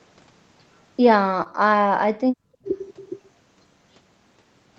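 Between 1.43 and 1.47 s there is a short concealed packet loss. About 20 ms of the speech never arrived in time, and the decoder patched the gap by extending the preceding sound and then blending back into the real signal. It is heard as a brief smear or wobble.

At 2.27 to 2.39 s and again at 2.60 to 2.66 s the speech drops abruptly in level, by about 35 dB in the first dip and about 25 dB in the second. This is most likely speech suppressed in double talk: the echo canceller seems to have mistaken the talker for loudspeaker echo while both sides were active, and clamped the signal down. It sounds like the speech briefly dipping, losing its high end or cutting out in pieces. The waveform shows sharp notches in the envelope, and the spectrogram shows near-empty vertical gaps, inside a picture that tops out at 8 kHz, as expected for Opus on this call path.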